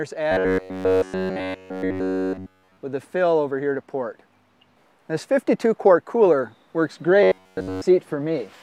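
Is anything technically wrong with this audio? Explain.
Yes. Robotic sound from repeated short buffers at 0.32 to 2.77 s and 7.23 to 7.82 s: a rigid metallic buzz at 93.8 Hz, likely from one roughly 10.7 ms buffer repeated while new audio was missing.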